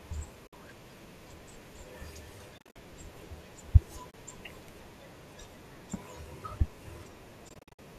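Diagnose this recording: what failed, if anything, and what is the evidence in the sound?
Network-stage AAC frame loss with muting: the decoder zeroed missing frames, leaving soft-faded holes in the speech at 0.47–0.53 s, 2.58–2.76 s, 4.11–4.14 s and 7.49–7.79 s. The two longer gaps are broken up into runs of about 50 and 70 ms. Their short fades fit the roughly 10 ms frames of the likely low-delay AAC stream.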